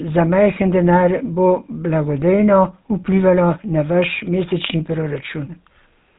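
Throughout the speech, the GSM full-rate codec leaves a buzzy, gravelly roughness, consistent with 13 kbps GSM coding. Its pulse-driven vocal-tract model rebuilds the excitation coarsely. A spectrogram shows nothing above 3.8 kHz and smeared, grainy harmonics.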